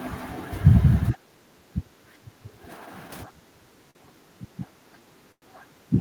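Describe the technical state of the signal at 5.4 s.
At 5.4 s the signal carries three overlapping faults.

A call audio freeze runs from 5.32 to 5.44 s, likely because delayed packets left the jitter buffer empty. The receiver stretches the last sound into a fading buzz that sinks into about 60 ms of silence. Speech then resumes exactly where it halted, about 0.1 s late. Unlike packet loss, nothing is skipped; a gap is simply inserted.

Speech suppressed in double talk spans 3.26 s to the end. The echo canceller, likely confused by both sides talking at once, turns the near talker down, with dips reaching some 25 dB. It differs from a network dropout because the cuts follow the overlapping talk rather than arriving as clean gaps.

A doubled audio track is also present. A full-band copy, a few decibels quieter, trails the speech by about a fifth of a second, likely from a second capture path. 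Unlike acoustic echo, the copy has no decay and no room colouring.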